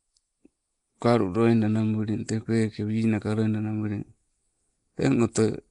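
From start to finish the speech carries a rough, hissy halo and a smeared, underwater quality, with nothing above 10.6 kHz. The likely cause is Nellymoser compression, the old Flash microphone codec: weak bands get no bits and are replaced with noise, at a rate near 44 kbps.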